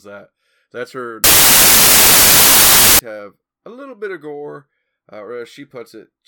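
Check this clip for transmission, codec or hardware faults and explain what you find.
One fault is present. Samples built from the wrong bytes, 1.24 to 2.99 s: the reader misassembles each sample's bytes, so its noisy low bits become the loudest part, turning the speech into loud, harsh broadband noise.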